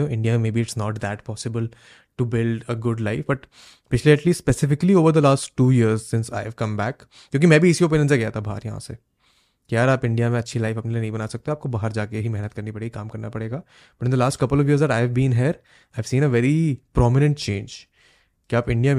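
No technical faults are audible at any point.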